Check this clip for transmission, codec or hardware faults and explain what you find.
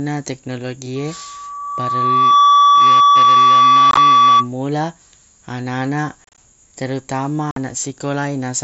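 Yes, two kinds of fault are present in this speech, carried over what sounds like a wideband mSBC headset link.

Loudspeaker feedback squeal runs from 0.96 s to 4.49 s. The microphone is picking up the loudspeaker it drives, and at 1.2 kHz the loop gain tops unity, so that frequency feeds on itself. It swells over roughly a second and a half into a steady tone about 10 dB above the speech. A single fixed pitch that grows on its own separates it from a tonal interference hum, which would sit at a constant level from the start.

Unconcealed Bluetooth headset packet loss appears three times. From 3.91 to 3.97 s, about 45 ms is lost, scattered across 60 ms, with the longest gap 22.5 ms. From 6.24 to 6.38 s, about 90 ms is lost across 135 ms, with the longest gap 30 ms. At 7.51 to 7.57 s, about 52.5 ms is lost. Short voice packets between headset and phone never arrived, and nothing was synthesised in their place. 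The result is hard-edged holes that sound chopped. Gaps with no smoothing or repeated sound mark these as unconcealed, unlike concealed loss, which smears or buzzes over the dropout.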